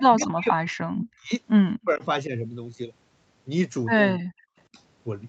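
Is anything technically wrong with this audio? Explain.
Yes. The speech is repeatedly pushed down by speech suppression in double talk from 0.07 to 1.33 s, 1.82 to 2.08 s, 2.27 to 2.32 s, 4.15 to 4.50 s and 4.73 to 4.77 s. The cause is likely an echo canceller mistaking the talker for loudspeaker echo while the far side was speaking and attenuating both. The longer stretches drop by about 40 dB, so the speech nearly vanishes. The brief ones dip only about 5 to 10 dB. On a waveform these appear as sudden hollows in the envelope. On a spectrogram they are vertical bands where the energy, already capped at 8 kHz by the call path, fades, and in the longer stretches falls to near-silence.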